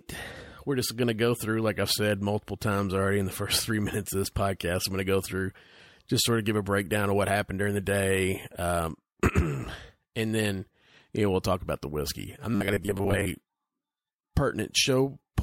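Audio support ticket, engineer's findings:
Robotic sound from repeated short buffers, 12.55–13.26 s, just after "about the whiskey I'm". Likely playback buffer underrun, with about half the audio replaced by looped ~10 ms segments and real audio skipped. The loop imposes a fixed 100 Hz buzz, turning the speech metallic and rigid while still loosely tracking the words.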